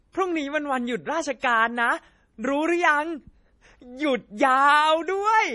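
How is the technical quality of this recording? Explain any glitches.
The recording is heavily compressed throughout, with one audible smeared attack.

MP3 compression, across the whole clip: nothing is present above 11.3 kHz, and the speech has a watery, swirling quality with metallic edges on s sounds. That hard treble ceiling and the flickering, thinned detail are likely the work of an MP3 encoder short of bits. It discards the top band outright and zeroes weaker frequency lines that then switch on and off frame to frame. The depth of damage fits a low bitrate around 32 kbps.

Pre-echo, from 1.40 to 1.43 s: a short hiss runs for about 31 ms just ahead of a sharp onset, and the attack itself sounds soft and smeared. The codec spreads its quantisation noise evenly across a transform block, so when a loud transient lands late in the block, noise sized for that loud moment also fills the quiet gap before it.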